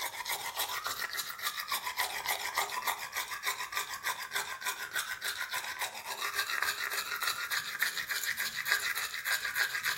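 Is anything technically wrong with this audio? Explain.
No, there are no technical problems to report here.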